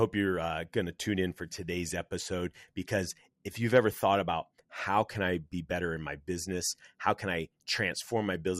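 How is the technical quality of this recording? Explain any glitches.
The recording's technical quality is poor, with one fault present from start to finish. Throughout, the speech sounds dull and gurgling, likely from MP2 compression at around 80 kbps: bit-starved upper sub-bands drop out, and the remaining bands turn coarse and granular.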